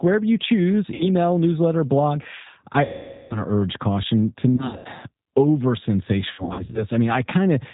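Speech carried over a G.729 codec, with audible roughness that fits an 8 kbit/s G.729A stream: the voice is rebuilt from a filter, pitch predictor and sparse pulses, so nothing above 4 kHz survives and it sounds slightly synthetic. VoIP packet loss concealed by the speech codec hits four times. At 0.94–1.08 s, 60 ms is lost. At 2.85–3.42 s, 450 ms is lost. At 4.55–4.87 s, 180 ms is lost, scattered in runs up to 90 ms. At 6.32–6.86 s, 240 ms is lost, scattered in runs up to 60 ms. In each gap the decoder extends the last sound into a fading buzzy tone or coloured noise, and the voice stays weak after packets return.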